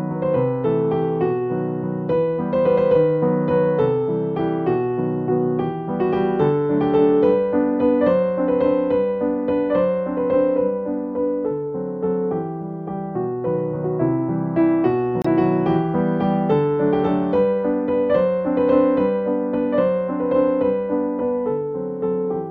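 At 15.22 to 15.26 s, a corrupt frame was decoded: damaged bits across a few compressed frames were played anyway, producing a brief, loud glitch peaking near -10 dBFS.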